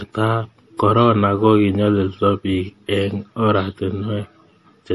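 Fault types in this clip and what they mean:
MP3 compression: Throughout the speech the treble stops abruptly at 11.5 kHz, with nothing above it, and the damage is plainly audible as a watery, swirling texture where quieter spectral detail flickers in and out between frames. This likely comes from a perceptual encoder that runs short of bits, cuts the top band at a fixed frequency and discards weak frequency components. The band limit and artefact level fit a low bitrate of roughly 48 kbps.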